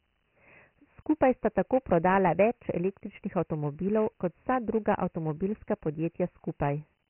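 Speech, muffled throughout with nothing above 3 kHz and a gritty hiss trailing every syllable: heavy Dialogic VOX ADPCM, its coarse 4-bit steps pointing to about 24 kbps.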